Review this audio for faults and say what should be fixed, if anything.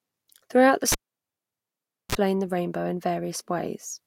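Cable pulled and plugged in, from 0.92 s to 2.15 s: a pop marks the moment the live lead comes out, and the speech drops to near silence for about 1.18 s. As the plug goes back in, the tip touches first and picks up a short burst of 60 Hz mains buzz, roughly 33 ms long, before a second pop as the full connection returns the signal. To prevent it, mute the channel or secure the connector before anyone handles a live cable.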